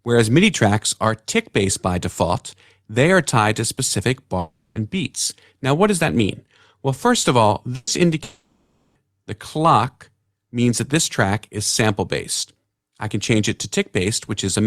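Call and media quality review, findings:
Long network dropout, likely, 4.39–4.78 s and 8.23–8.98 s: stream stalls, receiver concealment stretches the last sound into fading buzz or hiss for 360 ms and 720 ms, then audio resumes with that stretch lost.

Burst of packet loss, 7.75–7.90 s: consecutive packets missing, concealment holds and fades the prior sound for 120 ms, with a skip where playback resumes.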